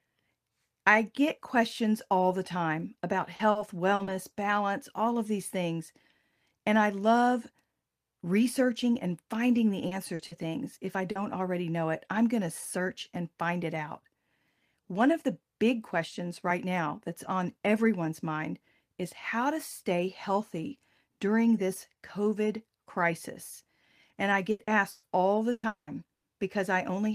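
Repeated packet loss (robotic sound) runs from 3.35 to 4.10 s. Audio kept arriving late or not at all, and each hole, up to 40 ms long, was patched by extending the preceding sound. About a fifth of the stretch is filled-in material, which makes it choppy.

Short concealed packet loss strikes four times: 9.87–9.94 s, after "researching and finding the"; 10.15–10.22 s, after "and finding the answer"; 10.27–10.34 s; and 11.11–11.18 s, just before "already know it I'm". Each time 40 ms went missing and was bridged by continuing the last sound, leaving a brief smear or wobble.

Repeated packet loss (robotic sound) returns from 24.51 to 26.26 s and is heavier. Gaps reach 200 ms, and roughly 37 percent of the span is synthesized continuation, so the sound turns choppy, with pieces audibly missing.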